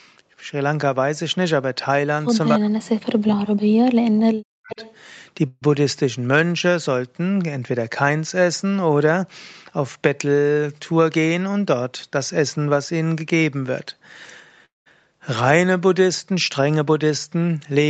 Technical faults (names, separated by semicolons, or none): echo leak; speech suppressed in double talk; call audio freeze; jitter buffer speed-up